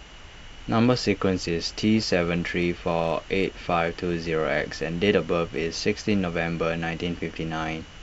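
No technical faults can be heard anywhere in this speech recording, and the signal's technical state gives nothing to flag.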